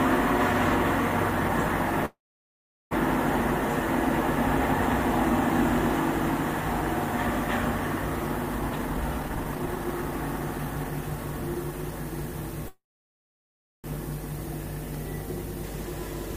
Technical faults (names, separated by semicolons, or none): call audio freeze; jitter buffer speed-up